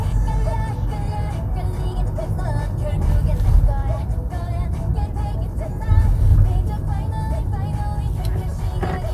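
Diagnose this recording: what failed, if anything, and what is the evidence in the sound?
Nothing failed; no faults heard.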